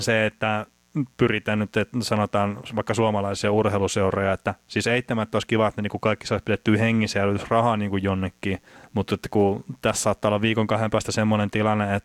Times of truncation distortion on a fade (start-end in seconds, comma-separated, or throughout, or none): none